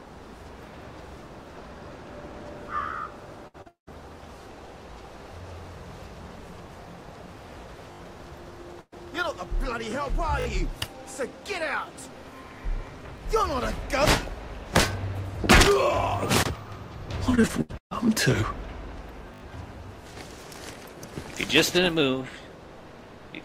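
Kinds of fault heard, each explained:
Burst of packet loss: Runs of consecutive packets arrive too late or not at all, and the receiver extends the last sound while fading it. At 3.47 s about 60 ms is bridged this way. At 8.81 s about 120 ms is lost and the fill decays into roughly 50 ms of silence before the audio resumes further on.
Short concealed packet loss: A brief hole of about 40 ms at 3.62 s is patched by continuing the preceding sound and blending back into the real signal. It is heard as a quick smear or wobble just before the longer break that follows.
Long network dropout: From 3.68 to 3.89 s the audio breaks off for about 200 ms. The extended sound fades out and leaves about 140 ms of silence, then playback picks up later with that stretch missing, likely because the network delivered nothing for that interval.
Repeated packet loss (robotic sound): Between 17.30 and 17.93 s, six gaps in quick succession, the longest about 134 ms, are each filled by repeating the last sound. 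About half of that span is synthetic fill, which gives it a choppy quality with pieces dropped.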